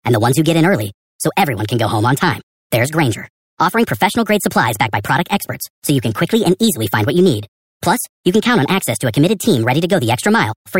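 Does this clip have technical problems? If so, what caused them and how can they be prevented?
Yes. Wrong sample rate throughout: the speech plays 1.38 times too fast and about 5.5 semitones high, which fits 32 kHz audio played at 44.1 kHz without conversion. Prevent it by reading the file's true sample rate and resampling to the output rate.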